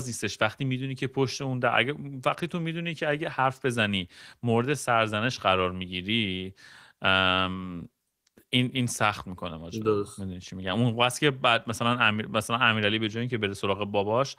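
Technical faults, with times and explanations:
8.07 to 8.25 s, comfort noise in place of the background: the sender likely paused transmission through Opus DTX during this gap, so the receiver filled the 180 ms with synthetic noise, swapping the real, already faint background for a smooth, featureless hiss about 3 dB quieter.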